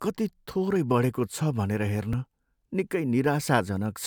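At 0.76 s and again at 2.13 s the speech jumps abruptly, likely a dropped buffer (overrun): about 10 ms, then a few milliseconds, were overwritten and the edges spliced together. The waveform shows a sudden discontinuity, the spectrogram a thin vertical broadband line.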